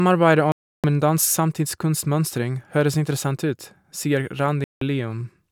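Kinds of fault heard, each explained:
Bluetooth stall: speech drops to silence for 0.32 s at 0.52 s and 0.17 s at 4.64 s, then resumes, likely interference delaying packets until the headphone buffer emptied.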